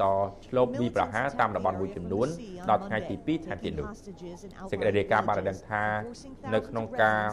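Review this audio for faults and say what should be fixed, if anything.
No faults heard here, so nothing needs fixing.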